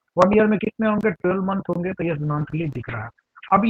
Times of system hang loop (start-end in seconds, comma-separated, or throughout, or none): none